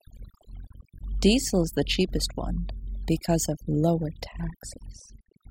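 From start to finish, the speech shows overdone noise removal: a noise reduction stage set far too aggressively cuts any frequency band that sits near its noise estimate, taking soft parts of the voice along with it. Between phrases the background drops to near silence sprinkled with twinkling specks.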